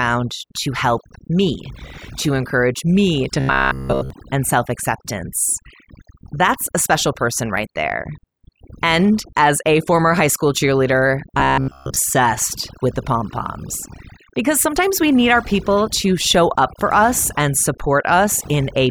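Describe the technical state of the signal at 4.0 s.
At 4.0 s the speech is a rigid metallic buzz near 66.8 Hz, heard from 3.4 to 4.10 s. This is robotic sound from repeated short buffers, likely one roughly 15 ms chunk replayed continuously while fresh audio is skipped. Underneath, the speech sits against near silence with twinkling specks, the result of overdone noise removal cutting quiet frequency bands along with the noise.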